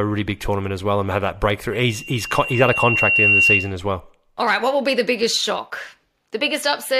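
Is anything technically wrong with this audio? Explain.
Yes. From 1.72 to 3.75 s a loudspeaker feedback squeal rings at 2.8 kHz, as the microphone re-amplifies its own loudspeaker. It swells over about a second and a half to about 5 dB above the speech, unlike a steady interfering tone.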